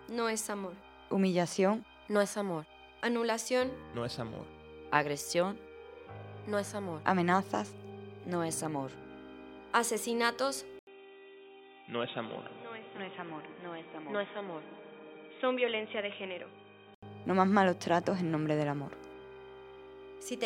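At 10.79 s, after an 80 ms gap, the sound goes dull and boxy, topping out near 3.8 kHz with a quieter level, likely an input switched to a poorer device, until 17.03 s.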